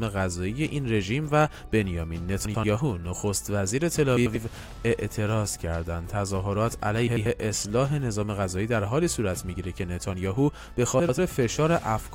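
Frames out of order at 2.45, 4.17, 7.07 and 10.99 s: two adjacent blocks of about 93 ms swap places, so each 0.19 s stretch flutters.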